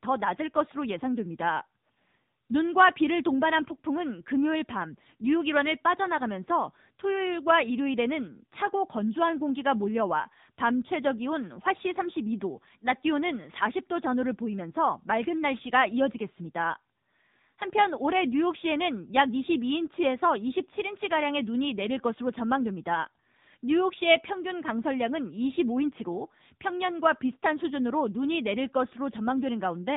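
Throughout, the speech carries AMR narrowband mobile codec damage: buzzy, synthetic tone that fits a 7.95 kbps mode, and a spectrogram cut flat near 3.8 kHz.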